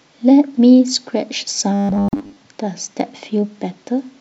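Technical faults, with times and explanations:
1.74 to 2.37 s: robotic sound from repeated short buffers. Speech turns into a rigid metallic buzz at 100 Hz that still roughly follows the words. It is likely caused by a 10 ms stretch being looped while most of the real audio is skipped. A spectrogram shows evenly spaced lines at multiples of 100 Hz, and the waveform repeats near-identical 10 ms cycles.
2.09 to 2.13 s: gap at a join of encoded pieces. A 44 ms silence breaks the continuous sound, which then resumes where it stopped, because separately encoded pieces kept their start delay and end padding. The waveform drops flat with smeared edges, and the spectrogram shows a blank vertical band.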